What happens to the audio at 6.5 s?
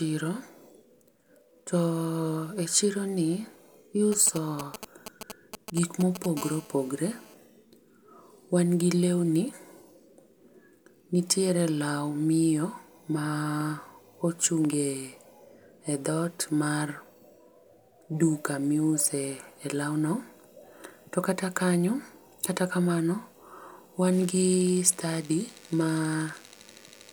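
A nearby 2G phone in a call is transmitting in bursts about 217 times a second, and the audio circuitry rectifies those radio pulses. From 6.37 to 7.34 s this GSM phone buzz sits as a steady, harsh 217 Hz rasp, rich in harmonics, about 18 dB below the speech.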